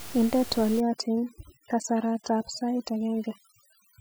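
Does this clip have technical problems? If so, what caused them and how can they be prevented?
Yes, overdone noise removal from 0.80 s to the end: the reducer cuts any band near its noise estimate, leaving twinkly near-silence and stripping quiet parts of the speech, though the room noise sat only about 15 dB under it. Back the reduction strength off so quieter speech detail survives.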